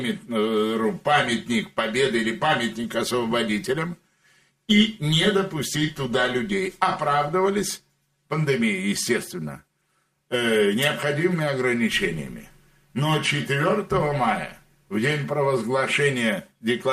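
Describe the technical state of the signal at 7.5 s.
At 7.5 s the signal shows channel delay (comb filtering), which runs through the whole clip rather than starting or stopping there. One channel arrives roughly 5 ms behind the other, and when the two are folded to mono the shared content cancels where the offset puts them out of phase. That carves fixed notches starting around 100 Hz and repeating every 200 Hz or so above it, leaving the sound hollow, phasey and thinned out.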